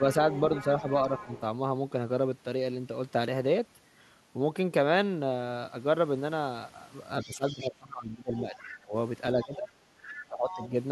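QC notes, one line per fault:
0.11–1.4 s, 7.22–7.69 s, 8.39–8.64 s, 10.08–10.13 s, 10.5–10.68 s: other side's voice leaking through. A second voice sits roughly 15 to 20 dB under the talker. It is longest at the start and in brief scraps later, likely residual loudspeaker echo the echo canceller failed to subtract from the microphone.
7.24–8.95 s, 9.44–9.7 s, 10.23–10.74 s: speech suppressed in double talk. The talker's voice dips by as much as about 20 dB in the first stretch and about 15 dB in the later two, the first and last overlapping the leaked voice. Both sides were likely speaking, so the canceller probably treated the talker as echo and attenuated everything.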